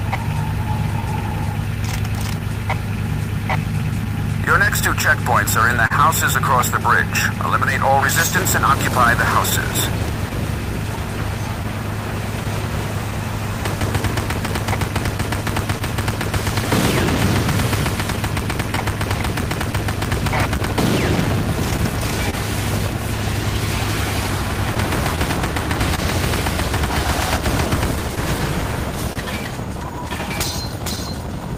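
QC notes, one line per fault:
Throughout: clock drift between sender and receiver. The sending clock runs about 1.5% slower than the receiving one, so the jitter buffer keeps draining and the receiver has to stretch or repeat small slices of sound to keep playing. The result is a recurring, unevenly spaced timing wobble. On a spectrogram these show as tiny smeared or duplicated columns scattered across the whole timeline, with no regular period.
0.09–5.92 s, 9.05–22.35 s, 24.75–26.00 s: scattered short gaps. Across these three stretches, roughly 30 isolated packets arrived too late or not at all, about 7, 20 and 3 respectively. Each hole is short, none longer than about 30 ms, and the receiver filled it by extending the preceding sound, so nothing audible drops out but brief ticks and smears dot the audio. Concealment covers only a few percent of each span, a little more in the last one. 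The waveform shows short flattened or repeated cycles, and the spectrogram shows thin vertical slivers of blurred, held partials.
29.13–29.18 s: short stall from a late packet. One packet was late, the jitter buffer emptied, and the receiver held the last sound for 29 ms until the packet arrived, then carried on from the same point. The timing slips back by that same 29 ms but no content is lost. It is heard as a momentary drawn-out moment with a faint buzzy or dipped quality. On the spectrogram, harmonics run flat for a narrow band of time, and the waveform shows a periodic, looped segment.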